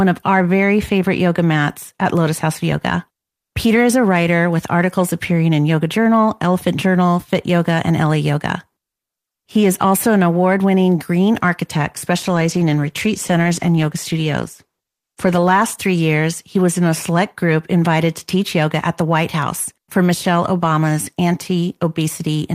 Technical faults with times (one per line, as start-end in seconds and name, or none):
12.17-16.45 call bitrate drop